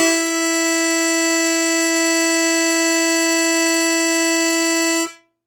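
Throughout the music, tones sound grainy and rough, with energy kept up to about 20.3 kHz but filled in by folding or noise, likely Opus compression at a low bitrate near 24 kbps.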